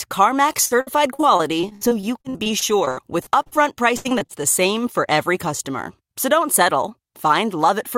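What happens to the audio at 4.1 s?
The speech turns choppy and robotic from 3.97 to 4.31 s: repeated packet loss, four gaps up to 79 ms patched by stretching prior sound, concealing about 42%.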